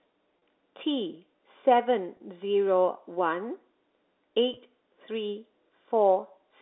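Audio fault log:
0.39–0.42 s, 2.17–2.20 s, 4.54–4.57 s: packet loss with pitch repetition. Each 30 ms gap, fitting three 10 ms packets, is filled by repeating the last pitch period, so it sounds like a brief buzzy hold rather than a click or dropout.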